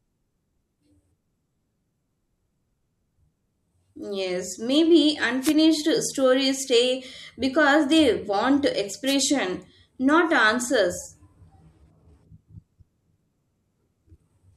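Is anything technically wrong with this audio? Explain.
Yes, there are two wireless microphone noise hits in this speech. The first runs from 5.41 to 5.54 s, just before "stories stay because they", and the second from 9.06 to 9.15 s, right after "stay because they want". The analogue FM radio link fades briefly as reflected signals cancel, so the receiver's own noise jumps up. Each one comes across as a quick swish of static.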